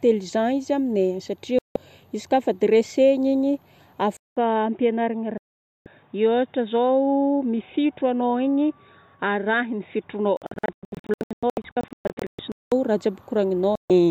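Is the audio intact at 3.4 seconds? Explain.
Yes, the speech at 3.4 seconds is intact, with no dropout, click, distortion or other fault at that moment.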